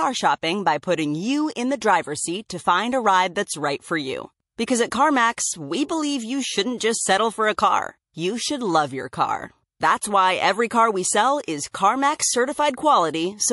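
MP3 compression runs through the whole of this speech clip: sibilants swirl and chirp as weak frequency lines drop in and out between frames. This is likely a low-bitrate encode, fitting roughly 48 kbps. Pre-echo occurs at 6.78–6.80 s, 11.45–11.48 s and 11.71–11.74 s. In each case, a hiss about 17, 20 and 23 dB above the surrounding floor smears in 20 to 31 ms before an attack. Coding noise is spread across a long block of about 48 ms, and the consistent smearing suggests the encoder never switched to short blocks.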